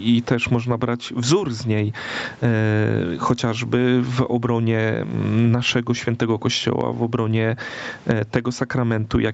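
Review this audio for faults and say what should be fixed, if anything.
Gain pumping runs through the whole clip. The gain swings by around 20 dB, likely because the input gain is set far too high for a fast limiter. On a waveform the speech looks flattened, with the noise floor rising between phrases, and a spectrogram shows the background brightening in the gaps. Lowering the microphone gain so peaks stay below the limiter would prevent it.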